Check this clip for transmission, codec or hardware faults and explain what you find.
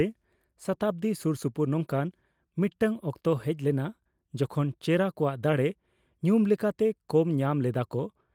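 No faults found anywhere in the speech.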